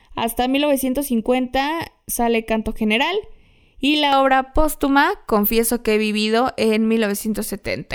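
From the start to 4.12 s the speech carries channel delay (comb filtering): one channel arrives roughly a third of a millisecond late, and when the pair folds to mono the shared content cancels at evenly spaced frequencies. The first notch sits around 1.5 kHz, with further ones roughly every 3 kHz above it, giving a hollow, phasey tone. A spectrogram shows fixed dark horizontal bands.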